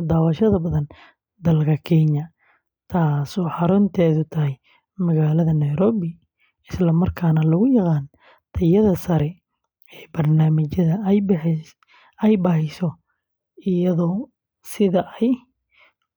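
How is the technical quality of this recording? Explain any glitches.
The technical quality of the recording is sound, with no glitches to explain.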